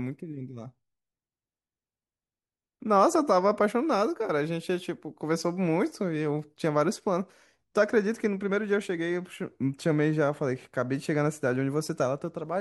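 Nothing is technically wrong with this speech recording, and no faults can be heard anywhere in it.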